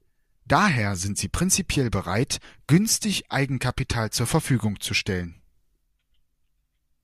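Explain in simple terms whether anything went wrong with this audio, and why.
Nothing went wrong with this speech recording, and no faults can be heard at any point in the clip.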